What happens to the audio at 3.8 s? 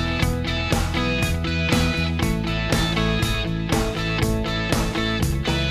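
At 3.8 s the audio sits inside a run of periodic USB or driver dropouts lasting from 1.34 s to 5.34 s, though no tick falls on that exact moment. Every 2.0 s, roughly three times, the bus or driver stalls and about half a millisecond of audio is replaced by silence, giving a short tick. Their strict, even spacing, heard only while sound is present, separates them from random clicks or irregular buffer underruns.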